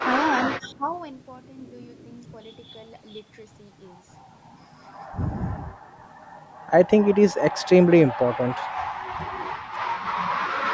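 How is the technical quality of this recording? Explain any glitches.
The recording has two short dropouts near the start, both showing speech suppressed in double talk. The rest of the band reaches up to 8 kHz, as the call microphone processing leaves it.

From 0.0 to 0.1 s and again from 0.5 to 0.89 s, the speech sinks by about 15 dB and then about 20 dB. The likely cause is an echo canceller that heard both sides at once and ducked the near talker. A waveform shows pinched envelopes there, and a spectrogram shows thinned, darker bands.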